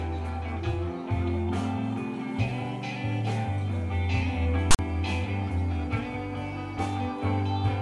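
At 4.71 to 4.79 s, a block of text tags with zero padding was decoded as if it were samples, which is the fault known as file tags played as audio. The text becomes a loud, lopsided rasp, and the padding drops to silence, giving a hard-edged 80 ms burst.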